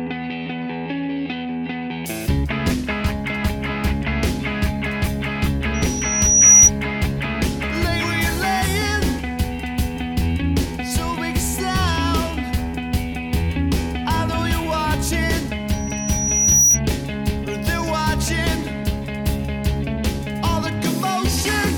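Loudspeaker feedback squeal appears at 5.74–6.71 s and again at 15.72–16.80 s: a microphone-to-speaker loop exceeded unity gain at 5.8 kHz, so a pure tone swells over roughly 0.7 s and 1 s respectively to well above the surrounding sound. A spectrogram shows a bright horizontal line at 5.8 kHz; the waveform shows a ramping envelope.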